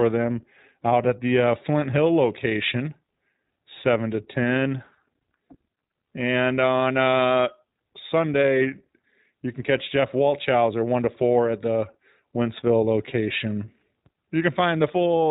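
From start to finish the speech sounds narrow and boxed-in, with nothing above 4 kHz, and carries a plainly audible rough, slightly synthetic grain. That is the iLBC codec, coding each short frame independently, and the texture fits 20 ms frames at around 15.2 kbps.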